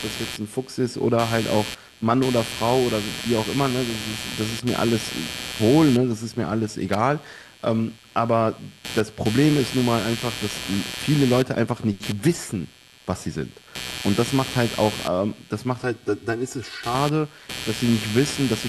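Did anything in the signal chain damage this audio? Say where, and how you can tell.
Yes, two problems. The first is computer activity noise in the analogue wiring: a buzzy, chirpy pulsing at around 150 Hz, roughly 10 dB below the speech, running through the whole clip. It follows the machine's load rather than the talker, the mark of processor or graphics current disturbing a shared audio ground.

The second is channel delay (comb filtering) from 15.83 to 16.95 s, probably a driver or buffer glitch. The speech goes hollow and phasey there. One channel slips about 3 ms late, so the mono sum cancels at evenly spaced notches starting near 200 Hz.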